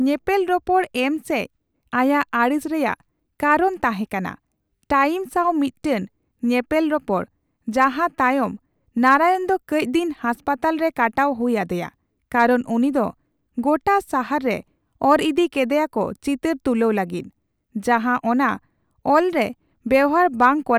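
No technical faults can be heard anywhere in this speech recording. Nothing in the sound points to a break, a distortion or a problem in the path that carried it.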